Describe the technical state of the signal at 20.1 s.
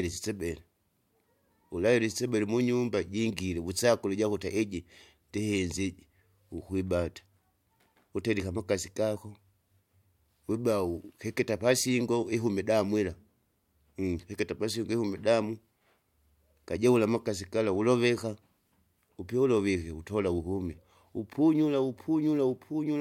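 At 20.1 s the speech signal is intact, with no audible fault at that moment.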